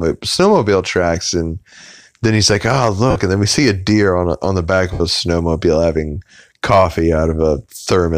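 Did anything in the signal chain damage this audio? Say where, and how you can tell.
Yes, lost LE Audio frames on the Bluetooth link at 3.10–3.16 s and 4.93–5.01 s (between "on the back of" and "snowmobile having coffee"). Concealment repeats the last spectrum with random signs, so the spectrogram shows a noisy smear. The gap lengths fit 7.5 ms frames.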